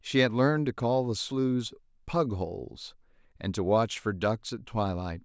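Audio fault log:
Nothing to flag in this bit of speech; there's no fault anywhere in it to log.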